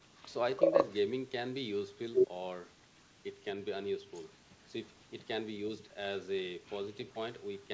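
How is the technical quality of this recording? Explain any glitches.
No glitches to report: the speech passes through call microphone processing and a WebRTC call path, where the G.722 codec at 64 kbps leaves nothing above 8 kHz.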